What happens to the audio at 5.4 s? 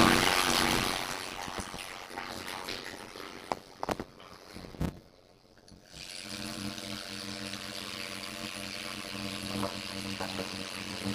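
At 5.4 s the audio is affected by a block size mismatch (padded), present through the whole clip. Each block is only partly filled, and zeros pad the rest, which fits 256-sample writes into larger reads. This causes a 91.9 Hz buzz, and the sounds run at 0.533 times normal speed with pitch about unchanged.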